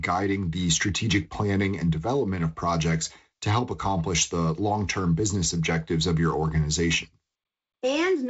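This speech clip has no technical fault. It has passed through G.722 wideband telephone coding, with nothing above about 7.7 kHz and a light coding texture in the lower band that fits the 48 kbit/s mode.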